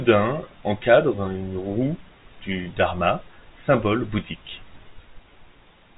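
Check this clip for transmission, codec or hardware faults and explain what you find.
No transmission, codec or hardware faults can be heard in this speech. It carries the narrow sound of G.711 telephone coding, with nothing above about 3.8 kHz, which fits an A-law telephone line working as intended.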